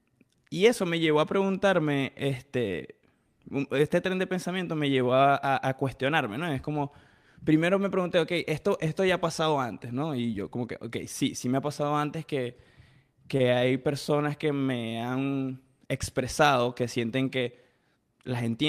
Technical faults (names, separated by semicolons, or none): short stall from a late packet